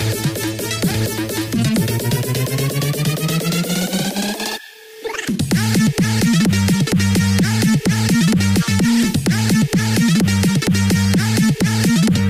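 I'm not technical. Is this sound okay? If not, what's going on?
No, the whole clip has audio read two samples at a time (double speed). The player grabbed the sound in pairs, so everything runs twice as fast and a full octave higher.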